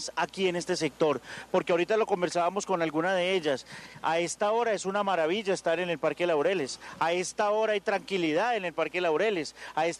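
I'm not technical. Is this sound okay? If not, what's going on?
Yes, nothing stood out as wrong when listening to this sound.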